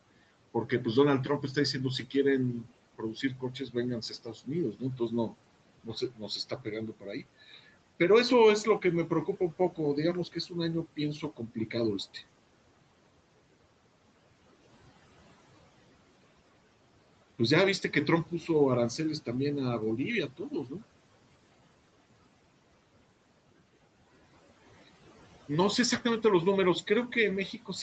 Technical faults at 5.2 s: noise suppressor artifacts; speech cut by the noise suppressor

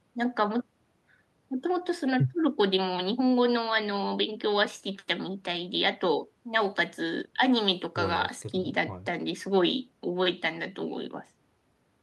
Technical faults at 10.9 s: none

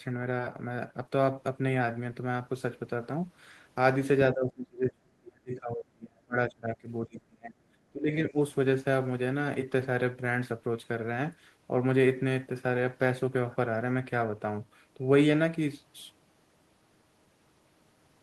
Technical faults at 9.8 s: none

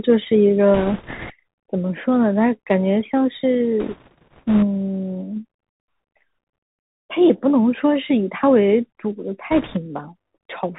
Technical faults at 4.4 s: Bluetooth CVSD headset codec; bit errors on a Bluetooth voice link

